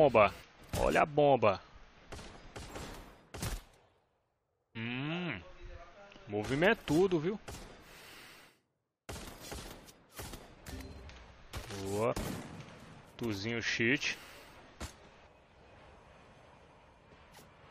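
Damaged data in a compressed stream leaves the decoder unable to read some frames and resyncing, giving brief blips at 0.41–0.43, 2.68–2.70, 4.75 and 12.11–12.13 s.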